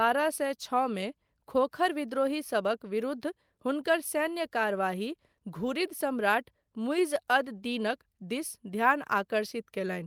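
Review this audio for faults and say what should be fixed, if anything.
Nothing to fix: no faults are audible anywhere in the speech.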